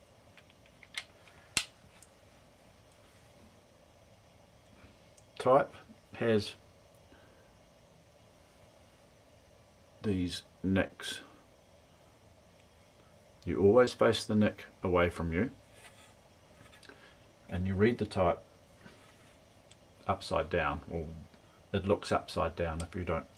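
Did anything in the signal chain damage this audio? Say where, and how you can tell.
Yes. The damage happened on the network, as short concealed packet loss. Two brief smears can be heard, at 10.87 to 10.91 s and at 13.85 to 13.89 s. Each lasts under 40 ms. In each, about 20 ms of audio arrived too late or never arrived. The receiver's decoder covered the hole by extending the preceding sound for roughly 16 to 17 ms, then blended back into the real signal. That synthetic bridge is what makes the audio blur for a moment.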